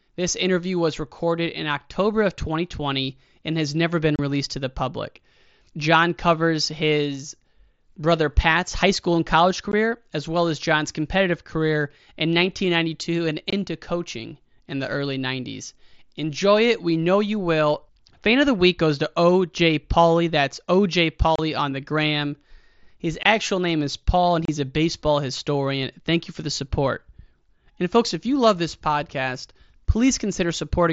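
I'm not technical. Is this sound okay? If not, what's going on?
No. The speech has tiny gaps at 4.16, 9.72, 13.5, 21.36, 23.23 and 24.45 seconds. Each lasts only 15 to 30 milliseconds, so it sounds like a quick break in the speech. This is unconcealed Bluetooth headset packet loss. The headset sends sound to the phone in small chunks. A few chunks went missing. Nothing filled the holes, so the speech simply stops and restarts sharply. The headset's mSBC codec carries the rest of the speech.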